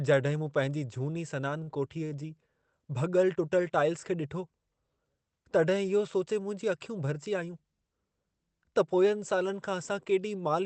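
At 1.63 to 1.69 s, just after "मूं पंहिंजी झूनी सनान", a short stall from a late packet stretches the last sound by about 38 ms until the delayed audio arrives. The sound is held slightly too long, with a slight buzz or dip, but nothing is skipped, which separates it from a true packet-loss gap.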